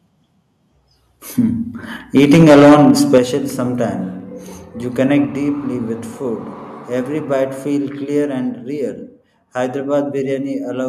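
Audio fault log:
2.16–3.18 s: microphone overload. The loudest speech peaks were driven about 9 dB past the converter's limit and roughly a tenth of samples are flattened, giving a harsh crackle, likely from excessive input gain.
2.18 s, 3.18 s, 5.25 s: microphone volume stepped down. Speech and background drop abruptly by about 2 dB, 7 dB and 4 dB, likely the call software cutting input gain after clipping.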